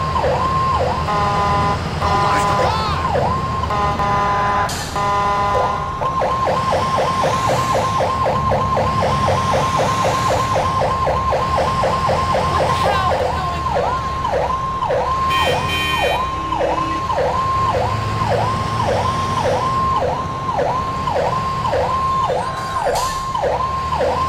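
Nothing technically wrong turns up here; the sound just runs along with no glitches or interruptions to point at.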